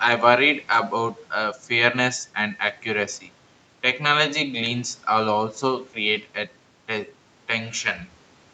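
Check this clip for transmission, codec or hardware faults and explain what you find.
No transmission, codec or hardware faults turn up in the speech; it shows the ordinary marks of a call's microphone processing, with the lowest bass trimmed by the high-pass filter and nothing present above 8 kHz.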